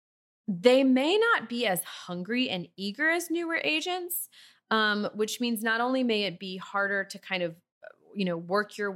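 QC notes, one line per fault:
No faults heard.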